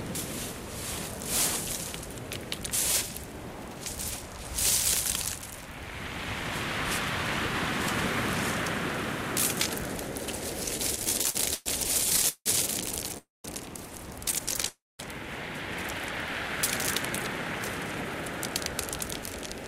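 Between 10.77 and 11.68 s, packets arrived more slowly than they were played, so the jitter buffer kept running dry, producing repeated stalls (stutter): eight gaps, the longest 112 ms, filled by stretching the last sound. At 12.10 to 12.48 s four more gaps, one of 172 ms, cover over half the span. Nothing is lost, but the sound drags and stutters.

At 13.18 to 13.46 s and again at 14.69 to 15.01 s, a call audio freeze occurs, likely from packets held up in transit. The last sound is held as a fading buzz or hiss and then goes silent for about 170 ms and 190 ms. The sound then resumes where it stopped, 265 ms and 306 ms late.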